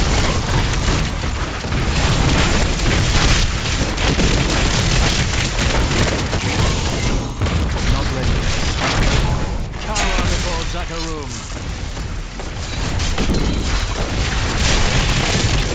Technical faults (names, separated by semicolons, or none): resampler restarted on every block